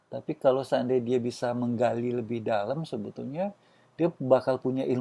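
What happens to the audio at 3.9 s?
Nothing goes wrong at 3.9 s: the speech carries on intact through that moment, with no dropout, click, distortion or other fault.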